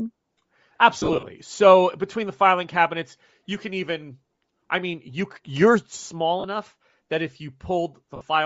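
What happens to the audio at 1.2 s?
Lost LE Audio frames span 0.99 to 1.25 s. Dropped frames are scattered through that stretch, about 150 ms missing in all, with the longest gap roughly 30 ms. For each gap the decoder repeats the last spectrum with scrambled phase, so the sound breaks into brief noisy smears instead of clean speech.

The same moment also carries the breathy, grainy edge heard throughout the speech. That is likely Bluetooth LC3 compression, with damage plainly audible, consistent with about 32 kbps and 10 ms frames.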